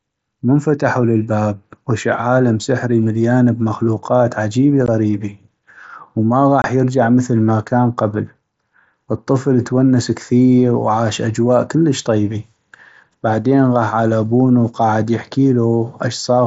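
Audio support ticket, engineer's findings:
Unconcealed Bluetooth headset packet loss: two hard-edged dropouts in the speech. The first, at 4.86 s, comes right after "سحري مليان بمخلوقات عجيبي" and lasts about 15 ms. The second runs from 6.62 to 6.64 s, about 22.5 ms, just before "يرجع مثل ما كان". Headset-to-phone voice packets were lost and replaced by silence or an idle pattern without concealment, which fits two and three 7.5 ms mSBC frames. The link's light mSBC graininess is on loud sounds.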